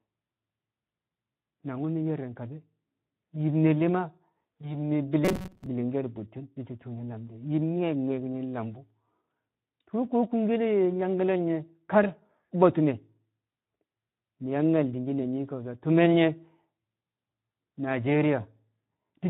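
Throughout the recording, the Speex codec damage is plainly audible. The speech sounds hoarse and noisy. This points to a low-to-middle quality setting, which fits roughly 11 kbps. At that rate, CELP coding has too few bits to model the excitation cleanly.

From 4.61 to 4.76 s, there is a VoIP packet loss concealed by the speech codec. The sound stretches into a brief, fading extrapolation, which suggests a single lost 20 ms frame. The decoder extrapolated from its last pitch and filter state, so the voice stays weak for about 130 ms afterwards before recovering.

From 5.25 to 5.66 s, there is robotic sound from repeated short buffers. The speech collapses into a rigid, metallic buzz at 188 Hz that loosely follows the speech contour. The likely cause is a segment of about 5.3 ms being repeated while fresh audio arrived too seldom, with about half of this stretch filled by repeats instead of real signal.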